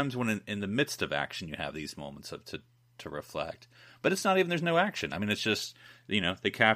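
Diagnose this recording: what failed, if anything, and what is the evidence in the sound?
Nothing failed in this recording.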